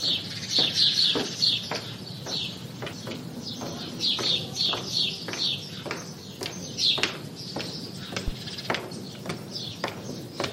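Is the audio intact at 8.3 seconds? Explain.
No. A phantom power thump hits from 8.28 to 8.33 s: a supply switched on or off on the live input sends a voltage step through the coupling capacitors, producing a deep, low thud that dies away quickly, with a decay of about 11 ms.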